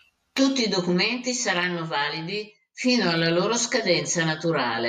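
From start to finish, one channel runs around 10 ms behind the other, and the two are summed to mono. This channel delay produces comb filtering: notches spaced from around 40 Hz upward hollow out the speech, leaving it phasey throughout.

From 0.15 s to 4.39 s, clock slip clicks appear, likely from two devices drifting apart by roughly 40 parts per million with nothing to lock them. Each tick fits a single sample slipping. About seven faint ticks recur roughly every 0.7 s.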